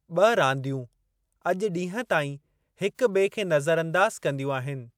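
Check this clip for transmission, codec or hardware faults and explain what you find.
Checking the clip turns up nothing to explain: no faults are audible anywhere in the speech.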